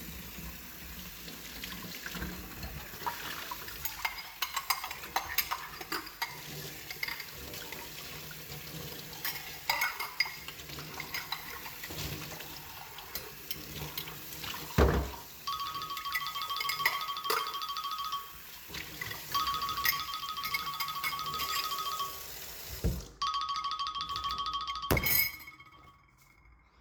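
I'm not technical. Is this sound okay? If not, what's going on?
Yes, nothing stood out as a problem when listening to this sound.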